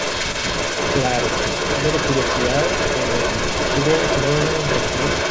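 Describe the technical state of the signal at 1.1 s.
At 1.1 s the far end's echo canceller has likely failed to remove its loudspeaker's output, so this echo leak, running from 0.0 to 5.31 s, returns a copy of the speech about 337 ms late at roughly the same level as the original.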